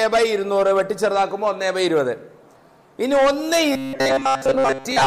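Robotic sound from repeated short buffers runs from 3.72 s to the end of the clip. The audio abruptly turns into a rigid, metallic buzz pitched at 134 Hz that only loosely tracks the underlying sound. The likely cause is incoming audio arriving too seldom, so playback fills the gaps by looping a fragment of about 7.5 ms, one period of that buzz. Most of this stretch is made of these repeats, and the real audio they stand in for is lost.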